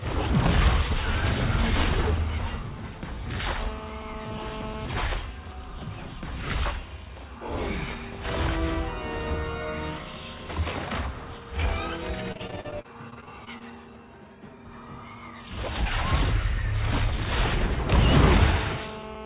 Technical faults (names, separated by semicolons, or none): GSM phone buzz; GSM signalling bursts; repeated packet loss (robotic sound)